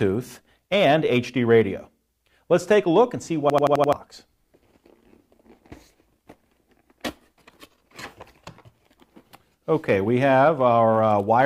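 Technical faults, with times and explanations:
3.50–3.93 s, system hang loop: the computer or its driver stalled while the sound hardware kept replaying the same ring buffer, so one 85 ms slice of audio repeats five times back to back. The period fits a 4096-sample buffer. At about 11.7 repeats per second the result is a rapid, mechanical machine-gun stutter rather than a steady buzz, and around 0.4 s of the real audio never arrives.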